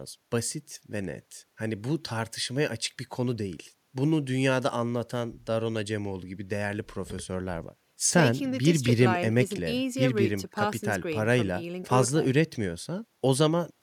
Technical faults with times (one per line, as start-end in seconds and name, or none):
none